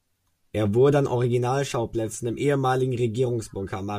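No technical faults can be heard anywhere in the speech. There is nothing at any point in the recording to describe as going wrong.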